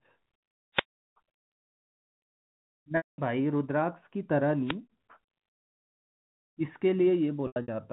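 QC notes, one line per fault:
0.74–0.84 s and 4.64–4.76 s, wireless microphone noise hit: the analogue FM radio link faded as reflected signals cancelled the direct path, so the receiver's own noise rose above the weakened carrier. Each dip lasts roughly a tenth of a second, about 0.10 s and 0.13 s, and comes through as a brief swish of static laid over the speech, with any clicks marking the deepest point of the fade.
1.38–1.50 s, 2.97–3.18 s and 7.47–7.68 s, packet loss with pitch repetition: audio packets went missing, and the receiver bridged each gap by repeating the last pitch period while fading it down. About 120 ms and 210 ms were lost in the first two, which fits 30 ms packets. The third lost 150 ms scattered across 240 ms, with the longest run 90 ms. The result is a held, buzzy tone dying into silence, then speech cross-fading back in.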